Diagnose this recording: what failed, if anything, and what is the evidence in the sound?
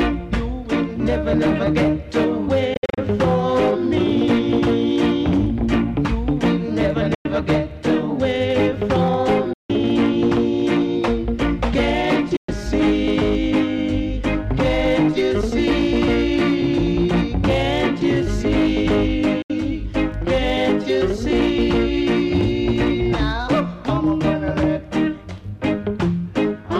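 What failed is the last hop of playback: the audio cuts to silence in five short holes, and a Bluetooth dropout on the link to the headphones is the likely cause. The gaps fall at 2.74–2.98 s (about 160 ms missing in several bursts, longest about 58 ms), 7.14–7.26 s, 9.53–9.70 s, 12.36–12.49 s and 19.42–19.50 s. Each gap has abrupt or briefly faded edges, and the sound picks up further along, as if it had kept playing through the gap.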